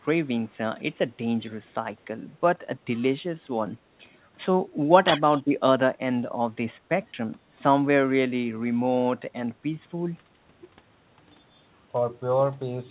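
A speech recording carried over a narrowband call line, with nothing above 4 kHz, which fits G.711 mu-law coding at 64 kbps, and two brief faults. From 0.09 to 0.24 s a very faint, delayed copy of the voice trails behind it, about 211 ms late and far below the main speech. This is an echo leak, likely from the far end playing the call on a loudspeaker while its echo canceller let part of the microphone pickup through and send it back. From 5.06 to 5.22 s the voice briefly dips by a small amount, a few decibels, over roughly a tenth of a second in total. This is speech suppressed in double talk, likely because both sides spoke at once and the echo canceller, unable to tell the local talker from the loudspeaker echo, turned everything down together.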